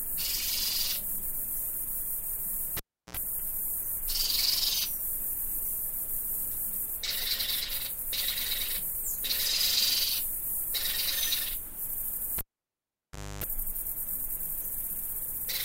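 A live cable pulled and plugged in at 2.77 s and 12.38 s: each time a pop drops the audio to near silence (350 ms, then about 1 s), then a half-seated plug buzzes at 60 Hz, then 50 Hz, before a second pop restores it.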